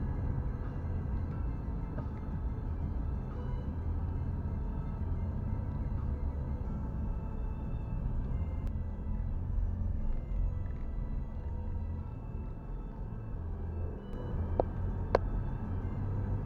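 From 8.67 s to 14.13 s the audio shows a channel delay (doubling): one channel runs about 46 ms late, which fits a 2048-sample buffer, and the mono sum doubles every onset. On a waveform each transient repeats at equal height; spectrograms show evenly spaced comb notches.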